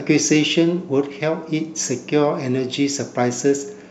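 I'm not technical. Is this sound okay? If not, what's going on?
No. A faint, gritty fizz runs through the whole clip and tracks the louder and brighter parts of the speech. It's crude rate conversion: the audio was resampled by estimating in-between values instead of filtering properly. The fizz fits a conversion from 44.1 kHz to 48 kHz.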